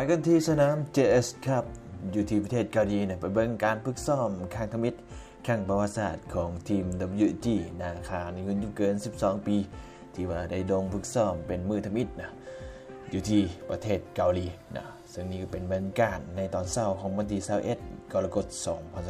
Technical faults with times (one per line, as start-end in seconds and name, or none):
none